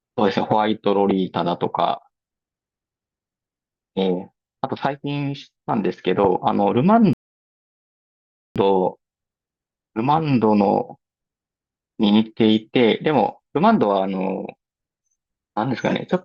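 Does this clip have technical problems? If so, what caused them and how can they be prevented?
Yes, there is a rebuffering stall in this speech: from 7.13 to 8.56 s the audio drops to silence, then picks up exactly where it stopped, adding about 1.4 s. The player ran out of downloaded data and waited for more. The waveform shows a flat line there, and the spectrogram a blank band across all frequencies. A larger playback buffer or adaptive bitrate streaming would prevent it.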